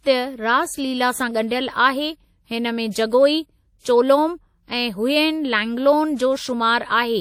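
A speech recording carries plainly audible transform-codec damage throughout, a ringing, washy quality with hiss that swells and fades with the signal. Nothing is present above 18.2 kHz. The sound points to WMA compression, likely WMA 1 at around 48 kbps. On a spectrogram the content stops sharply at 18.2 kHz, and the upper bands look smeared and patchy with faint lines missing. Right after "हुयेन लैंगलोन", from 6.16 to 6.19 s, there is pre-echo. A short hiss lasting about 32 ms comes before an attack and softens it. The codec has spread the noise meant for the loud onset back over the quiet moment before it. In the waveform and spectrogram this appears as a thin band of broadband noise leading into the transient.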